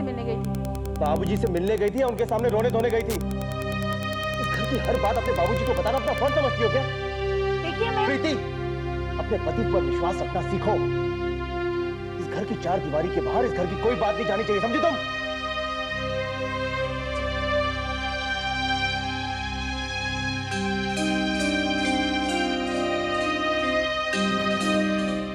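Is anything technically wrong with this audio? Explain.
Yes. From 0.44 to 6.35 s there is Wi-Fi interference. A nearby radio's beacon, repeating every 102.4 ms, is rectified by the audio circuit, producing a steady tick about ten times a second, roughly 20 dB below the sound. A spectrogram shows evenly spaced thin vertical broadband lines, and the waveform shows small regular spikes.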